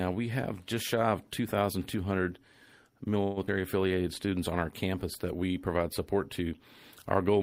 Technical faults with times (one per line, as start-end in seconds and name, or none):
3.23-3.38 call audio freeze
3.46-3.49 skip ahead
3.88-4.31 jitter buffer slow-down